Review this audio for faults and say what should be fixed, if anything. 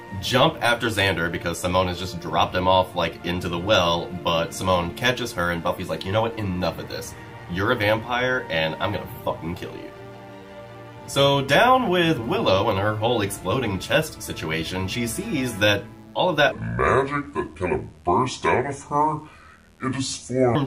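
A mains buzz runs through the whole clip, a steady raspy tone built on 60 Hz harmonics at about 35 dB below the signal. Sharp switching spikes, twice per mains cycle, leak in from a dimmer, rectifier or unshielded cable. Prevent it with shielded, properly grounded cabling away from switching supplies.

From 16.52 s to 20.55 s a section at the wrong speed plays at 0.683 times normal, dropping pitch by about seven semitones, so the sound turns deep and dragged. The likely cause is an editor or player using a mismatched clock. Prevent it by confirming sample-rate settings match throughout the chain.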